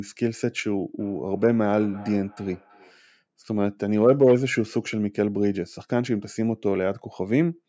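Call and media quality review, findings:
Feedback echo between two devices, 0.99–3.06 s: speech returns roughly every 0.3 s, thinner and ringing, peaking about 21 dB below direct speech. A second device in the room replays this mic's feed, which the local canceller cannot remove. Spectrogram shows faint, evenly spaced ghost copies trailing each syllable.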